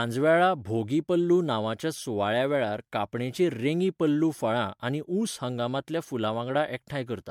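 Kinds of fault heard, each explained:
Generation loss: throughout, speech sounds swirly, hollow, smeared, attacks blurred, likely from about four MP3 passes near 96 kbit/s, each requantising on shifted frames.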